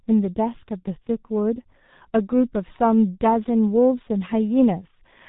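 Speech that sounds muffled and hoarse from start to finish, with smeared consonants and nothing above about 3.8 kHz. This is heavy G.723.1 codec damage: coarse 30 ms frames and a slowly updated voice model, consistent with a rate near 6.3 kbit/s.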